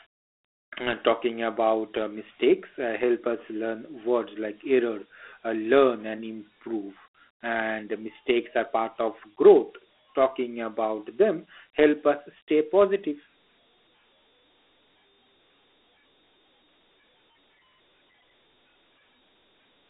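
Speech carrying Dialogic VOX ADPCM damage from start to finish: a telephone band from 300 Hz to 3.5 kHz, nothing above 3.9 kHz, and gritty hiss tracking the speech, which fits 4-bit OKI ADPCM at 32 kbps. Plain G.711 shares the band but not this grit.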